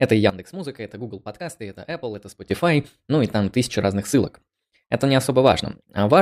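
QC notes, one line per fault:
0.30–2.51 s, sudden gain jump: at 0.30 s the whole signal drops by about 14 dB in a single step, speech and background noise together, then snaps back up at 2.51 s with no fade either way. Because the noise floor moves right along with the level, it isn't the talker backing off the mic. It's likely a digital gain change applied instantly without a ramp, which is why both edges sound so abrupt.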